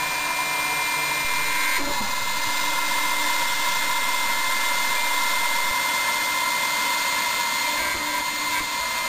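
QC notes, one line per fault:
1.25–5.71 s, DC step: the waveform's zero line jumps by about -28 dBFS at 1.25 s, holds there, then drops back at 5.71 s. Each sudden shift in the baseline is heard as a low thump, while the sound itself continues unchanged between them.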